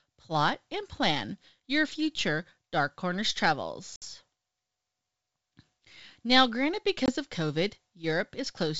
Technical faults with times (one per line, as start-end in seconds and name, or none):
3.96-4.03 packet loss on an ADPCM call
7.06-7.11 packet loss on an ADPCM call